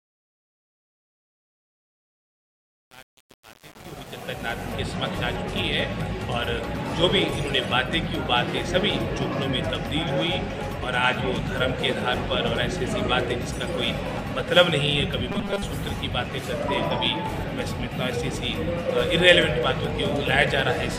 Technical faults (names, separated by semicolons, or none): truncation distortion on a fade; robotic sound from repeated short buffers